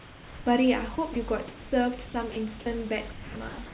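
Speech with room noise sitting about 22 dB below it, carried over a narrowband call path whose content stops at 4 kHz, which fits G.711 mu-law. The sound dropped by the voice detector appears at 0.00–0.46 s and 1.48–1.72 s. In each stretch the speech gives way to steady synthetic hiss and then returns. The likely cause is that the sender's detector classed the sound as background and stopped transmitting, so the receiver filled the gap with comfort noise of the RFC 3389 kind. About 230 ms and 210 ms of actual speech are lost. Sound chopped by the voice detector occurs at 0.96–1.16 s, 2.06–2.66 s and from 3.12 s to the end. Here the detector likely toggled between sending and muting more than once. Parts of the speech are replaced by comfort noise, leaving holes in the sound. Roughly 40 ms, 180 ms and 420 ms are replaced in those three spans.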